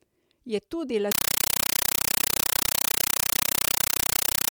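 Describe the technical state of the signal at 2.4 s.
At 2.4 s the speech is gone, replaced by very loud, harsh chattering static. Each 8 ms burst of noise is followed by silence, repeating 31.25 times a second. This is a compressed stream played as audio, running from 1.12 s to the end of the clip. An AC-3 bitstream, consistent with a 384 kbps encode, is being treated as ordinary samples instead of being decoded, so each coded frame plays as noise followed by zero padding.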